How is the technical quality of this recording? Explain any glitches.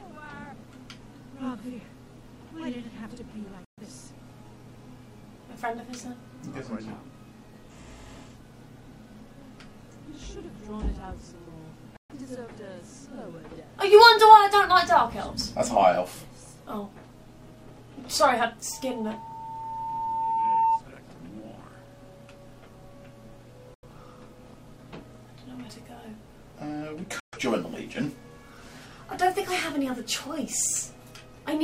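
The recording has two kinds of fault: four brief muted holes in the sound and one feedback squeal.

The digital broadcast dropouts come at 3.65 s, 11.97 s, 23.74 s and 27.2 s. Each time the audio snaps to silence within about 3 ms and returns after roughly 0.13 s, or 0.09 s at 23.74 s. The receiver likely stopped getting valid frames and muted until clean data resumed. The gap lengths fit two or three lost frames, and whatever was transmitted during those moments is gone.

From 18.71 s to 20.84 s a loudspeaker feedback squeal appears. A pure tone at 901 Hz swells steadily over about two seconds until it sits about 5 dB above the programme. A microphone was picking up the loudspeaker it was feeding, and at that one frequency the loop gain exceeded unity, so the tone kept reinforcing itself.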